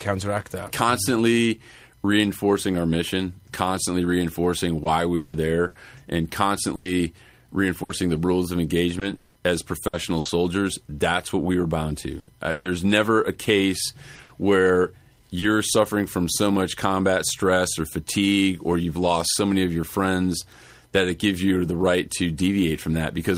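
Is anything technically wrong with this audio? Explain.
Yes. Repeated packet loss (robotic sound) affects 4.83 to 10.27 s and 12.19 to 15.44 s. Lost audio keeps being patched by extending the last sound, up to 200 ms at a time. Unlike silent dropouts, this gives choppy speech with pieces missing rather than clean gaps.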